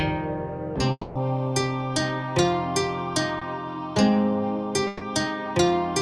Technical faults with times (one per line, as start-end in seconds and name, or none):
0.91-1.17 long network dropout
3.39-3.43 short concealed packet loss
4.87-5.03 burst of packet loss